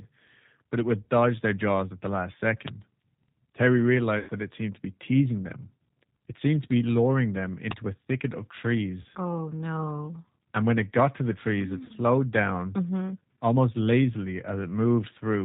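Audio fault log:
throughout, G.729 codec: The speech sounds narrow, slightly rough and synthetic, with nothing above 4 kHz. The decoder rebuilds each 10 ms frame from a vocal tract filter, a pitch predictor and a few pulses, and the plainly audible damage fits an 8 kbit/s G.729 link.
2.68 and 7.71, uninitialised buffer: Each is a very short, loud snap of digital noise, the second about four times longer at about 3 ms. A block of memory was played before real audio had been written to it, so leftover values were heard as samples.
4.19 to 4.31, 9.02 to 9.05, 11.85 to 11.92, VoIP packet loss concealed by the speech codec: The speech smears into a buzzy, fading tone and stays weak briefly afterwards. The gaps fit about 80 ms, 20 ms and 40 ms of lost packets that the decoder filled by extrapolating its last pitch and filter.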